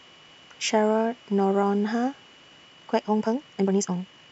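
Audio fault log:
2.66–4.31 s, time-stretched section: right through to the end the speech jumps to 1.8 times its pace with unchanged pitch, so it sounds rushed. Likely software squeezed it to fit a length, dropping short slices to keep pitch.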